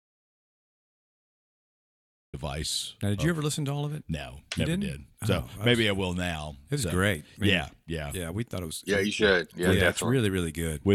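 From the very start until 2.34 s the clip is dead silent, with no room tone at all, before the speech cuts in mid-flow. This audio dropout to silence is likely a lost input, such as a disconnected device or stray mute, while the recorder kept writing silence.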